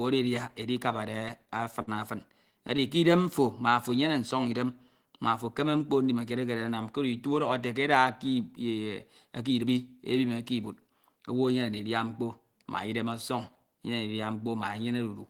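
Repeated stalls (stutter) run from about 1.19 to 1.89 s. The incoming stream fell behind the playback rate, so the jitter buffer kept draining. Six times the receiver had nothing new to play and held the previous sound, for 98 ms in total and at most 53 ms at once, about 14% of that stretch. Nothing is lost, but the speech drags and catches in short, repeated hitches.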